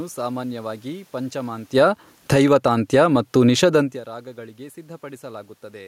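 From 1.63 to 2.63 s the automatic gain is falling: the gain control decides the input is too loud, or its background noise too strong, and pulls its gain down over about a second, roughly 12 dB in all. You hear the level sag steadily, and the room noise sinks right along with the speech, which gives it away as processing. The talker shifting around 1.5 s and again around 4 s changes the level too, but that's just someone moving at the mic.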